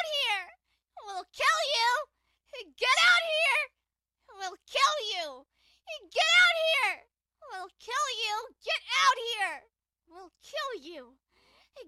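At 6.73 to 6.76 s, compressed frames are skipped. About 30 ms of audio never plays. The sound jumps ahead.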